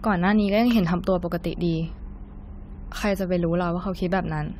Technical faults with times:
0.00-4.59 generation loss

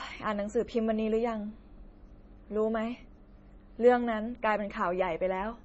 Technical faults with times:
0.00-5.64 MP3 compression

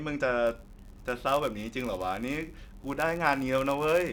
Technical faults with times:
0.46-4.12 block size mismatch (padded)

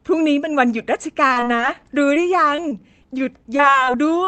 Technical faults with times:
1.27-1.81 repeated packet loss (robotic sound)
2.14-2.18 short concealed packet loss
2.56-3.06 repeated packet loss (robotic sound)
2.79-3.26 jitter buffer slow-down
3.44-3.89 repeated packet loss (robotic sound)
4.25-4.27 short stall from a late packet

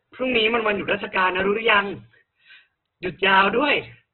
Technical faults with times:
0.00-4.14 Opus compression
1.40 repeated buffer
3.05 repeated buffer

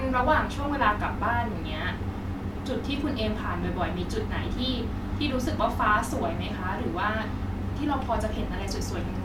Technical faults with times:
none

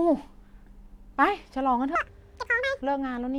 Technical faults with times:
1.95-2.82 audio read two samples at a time (double speed)

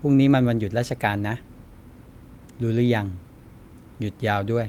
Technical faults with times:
none

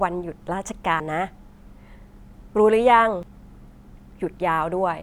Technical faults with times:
1.00 compressed frames skipped
3.23 compressed frames skipped

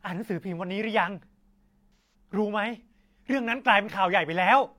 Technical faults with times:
1.94-2.14 AAC frame loss with concealment

